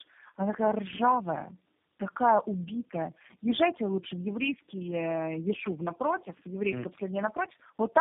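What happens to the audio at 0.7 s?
At 0.7 s the speech carries tandem speech coding, present across the whole clip. It has been decoded and re-encoded by three low-rate speech codecs in a row, likely G.729A, AMR-NB, then G.729A again. Each stage adds damage. The speech sounds rough, muffled and warbly, with nothing above 3.7 kHz.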